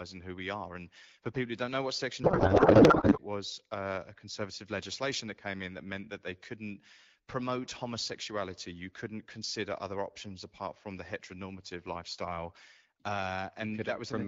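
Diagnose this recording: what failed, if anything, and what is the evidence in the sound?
Codec payload misread at the codec stage, 2.23 to 3.18 s, before "was uh a conservative": speech turns to garbled warble, a spectrogram shows formants smeared into noise, which fits octet-aligned AMR parsed as bandwidth-efficient.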